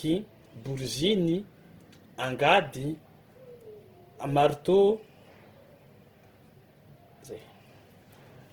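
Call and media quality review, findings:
Opus compression, throughout the speech. Rough, grainy, noise-filled texture, plainly audible. Likely CELT-mode Opus filling starved bands by folding lower ones or with noise. Full bandwidth kept, content up to about 20.1 kHz, at a bitrate near 16 kbps.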